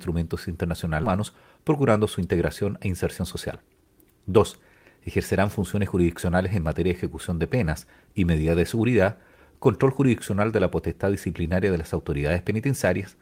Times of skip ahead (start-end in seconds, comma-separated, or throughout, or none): 1.03-1.05